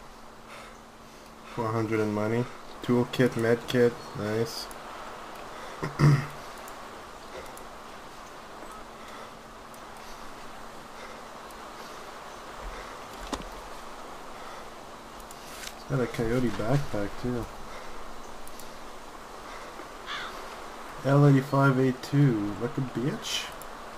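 Listening through the recording, nothing stood out as a technical problem at any point.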